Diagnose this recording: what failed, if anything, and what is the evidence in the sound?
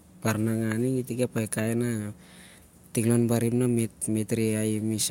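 Nothing failed: no stage in the chain, from capture through playback, leaves an audible mark on this speech recording.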